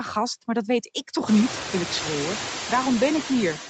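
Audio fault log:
throughout: noise suppressor artifacts. Band-by-band gain cuts remove only about 1 dB, so room noise rising around 1.5 s stays only about 12 dB beneath the speech.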